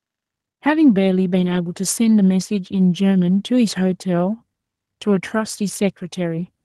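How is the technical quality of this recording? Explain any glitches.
The recording is an Opus call at a 12 kHz bandwidth, with one glitch: a lost packet rebuilt from error correction between 1.39 and 1.57 s. Several packets went missing there, and the decoder filled about 100 ms of audio with the low-bitrate backup copies carried in the following packets, so the speech never drops out. The patch sounds briefly rough and grainy. A waveform shows no gap, while a spectrogram shows a smeared, noisier stretch with less fine harmonic detail.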